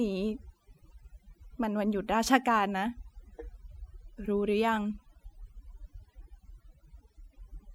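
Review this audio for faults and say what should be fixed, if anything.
The speech runs throughout over a near-silent background flecked with twinkling specks. This is overdone noise removal: the reduction was set so strong that it pulled individual frequency bands down whenever they came close to its noise estimate, taking quiet parts of the speech along. Running the noise reduction at a gentler setting would prevent it.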